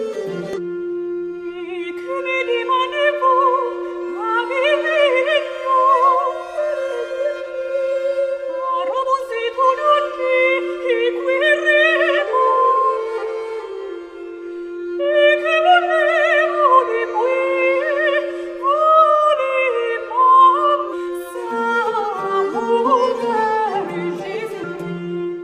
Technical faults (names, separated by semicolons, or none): damaged data in a compressed stream